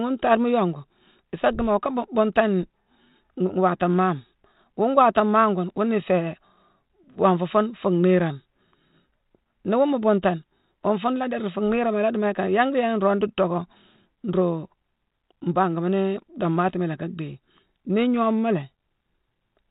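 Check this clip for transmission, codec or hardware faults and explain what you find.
Nothing stood out on listening to this speech recording.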